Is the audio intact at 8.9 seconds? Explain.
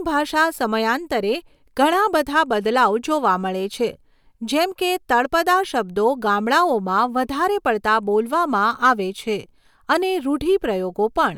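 No. From 8.84 to 8.91 s, just before "આવે છે", the speech drives a stage past its ceiling by about 3 dB, so that stage cannot pass the peaks and slices them flat. This is hard clipping: the squared-off tops add harmonics high above the speech's own frequencies, and for those few dozen milliseconds the loudest moments come through with a brief harsh crackle rather than a clean rounded waveform.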